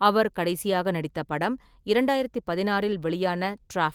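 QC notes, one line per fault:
No faults found on the speech track; nothing to log.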